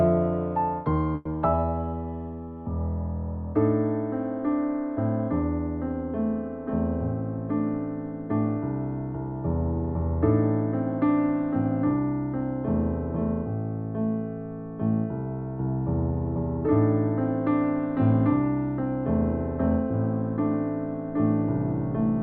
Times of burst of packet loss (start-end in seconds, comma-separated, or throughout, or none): 1.15-1.27